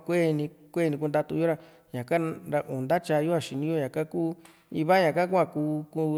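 There are no technical faults to describe in this speech recording.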